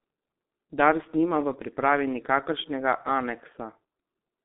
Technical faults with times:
0.00-4.45 G.723.1 codec

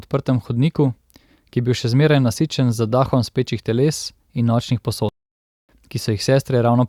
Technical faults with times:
5.09-5.69 playback stall

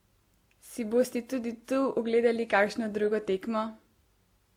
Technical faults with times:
0.00-4.57 transcoding between lossy codecs

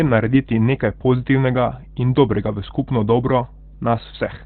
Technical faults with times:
0.00-4.46 mains hum
0.00-4.46 Opus compression

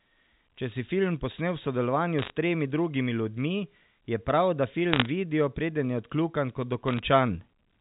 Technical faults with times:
2.19-2.30 bit errors on a digital phone line
4.90-5.06 bit errors on a digital phone line
6.88-6.99 bit errors on a digital phone line

